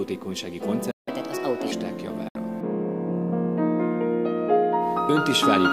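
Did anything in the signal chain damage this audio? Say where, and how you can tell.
Yes. A playback stall hits the buffer stage. The sound goes silent from 0.91 to 1.08 s, likely because the player ran dry or its thread was blocked.

Playback catch-up at higher speed follows. From 1.08 to 1.72 s the audio runs 1.25 times fast, pitch raised roughly four semitones, as the player resamples through its backlog.

A digital broadcast dropout occurs at the receiver. At 2.28 s the sound fades out within 3 ms and returns at 2.36 s. The missing 64 ms suggests two failed frames were muted.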